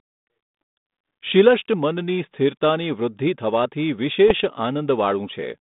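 From 4.28 to 4.41 s the speech breaks into pops and a rough, grating burst, with the level jumping briefly. These are bit errors on an ADPCM link. Flipped bits corrupt the coded differences. The decoder's step size and predictor are thrown off too, so each error rings on for several milliseconds. The error rate is near a few tenths of a percent. Around it, the G.726 stream at 32 kbit/s carries a narrow telephone band from 150 Hz to 3.7 kHz.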